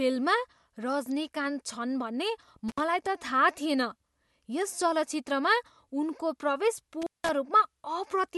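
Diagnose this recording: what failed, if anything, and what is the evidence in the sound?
The analogue wiring has an intermittent contact, probably a loose plug or cable. The speech breaks up from 2.69 to 2.80 s, with the line open for about 64 ms, and again from 7.02 to 7.29 s, open for about 178 ms, with crackle where the contact scrapes open and closed.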